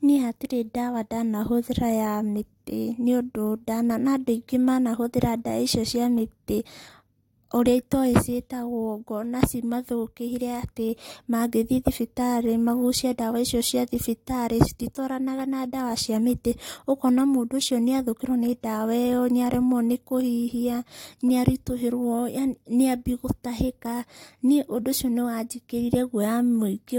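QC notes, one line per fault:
The speech signal shows no audible technical faults at any point.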